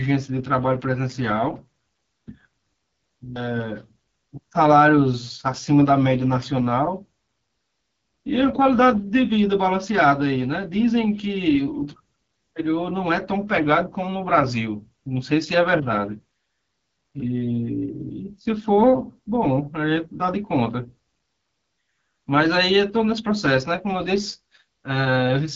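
From start to finish the speech runs through the AMR wideband (HD Voice) codec, and at this quality it sounds like the 8.85 kbit/s mode, one of the lowest. The codec models the voice from a pulse train through a vocal tract filter, and at so few bits that model is coarse, so the speech comes out rough and raspy, plainly damaged. Nothing is heard above about 7.6 kHz, and the top band is filled with shaped noise.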